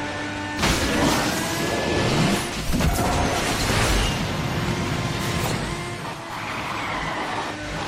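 Nothing is technically wrong with the clip; no faults can be heard at any point.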